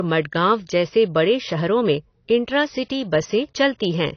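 Throughout, the speech sounds dull and smeared, with nothing above 6.6 kHz and plainly audible warble, likely AAC compression at a low bitrate such as 24 kbps.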